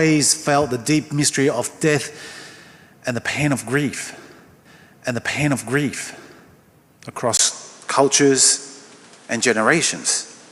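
At 4.65 s a stream segment is repeated: the player jumps back and replays the same two seconds of programme, running to 6.65 s, with a small blip marking the jump. Unlike a stutter or a dropout, nothing is lost or frozen. A whole stretch of audio simply plays a second time, intact and at normal speed, so the clip runs two seconds longer than it should.

At 7.37 s, after a brief gap of about 20 ms, the character of the sound changes abruptly and stays changed to the end. Nothing is left above 11.4 kHz, the level shifts by around 5 dB, and a new noise floor sits roughly 30 dB below the signal. This points to the input being switched to a poorer device, likely another microphone or a headset profile. What separates it from a filter or codec change is that the bandwidth, tone, level and background noise all change together at one instant.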